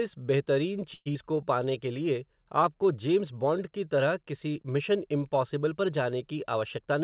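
At 0.94 s the speech stalls in a call audio freeze, most likely because packets were held up and the jitter buffer ran dry. For 0.12 s the receiver extends the last sound as a fading buzz or hiss, ending in about 20 ms of silence, then resumes where it stopped with nothing lost. A spectrogram shows smeared, repeating harmonics decaying into a blank strip, and the waveform shows a shrinking periodic envelope and then a flat line.

Right after, at 1.14 s, a skip ahead drops roughly 70 ms of speech, bridged by only about 12 ms of fill. The two sides join almost directly, so a fragment of sound vanishes abruptly. On a spectrogram, formant tracks jump discontinuously at a vertical seam, and the waveform shows a sudden change in shape with no gap.

From 1.23 to 1.66 s a jitter buffer slow-down stretches the audio to about 90% speed by repeating single pitch periods, adding 49 ms. Sounds drag at unchanged pitch. 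A spectrogram shows elongated, level harmonic bands, and the waveform shows near-identical cycles stacked in runs.

From 6.37 to 7.02 s a jitter buffer speed-up runs the speech at about 109% speed, trimming roughly 70 ms by cutting out short pitch-period pieces, so it sounds hurried at the same pitch. Harmonic bands appear compressed in time, and the waveform shows small splice points where cycles were removed. The whole clip also has nothing above 4 kHz, which fits a G.711 A-law call path at 64 kbps.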